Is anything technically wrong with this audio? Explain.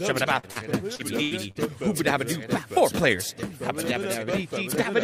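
Yes. Short concealed packet loss occurs at 0.39–0.46, 0.51–0.58, 0.95–1.02 and 1.51–1.58 s. Each time, about 40 ms of audio never arrived, and the receiver filled the gap by extending the preceding sound. The result is a brief smear or wobble. On a spectrogram it shows as a short stretch of copied, blurred harmonics or flat noise.

A burst of packet loss at 1.23–1.34 s drops about 80 ms. The concealment repeats the last sound while fading it out, giving a held buzz or dying hiss before the audio picks up further on. The waveform shows a tapering, oddly regular segment there.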